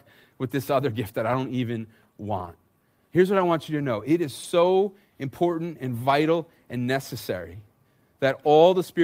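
Brief rough, noisy patches in the speech, with no gaps, at 2.37–2.47 s, 3.37–3.39 s before "I want you to", 4.43–4.45 s after "to know it is", and 7.17–7.19 s after "important and vital and". Each is a lost packet rebuilt from error correction: the decoder played the low-bitrate copy carried in the next packet, about 60 ms at the first spot and 20 ms at the others.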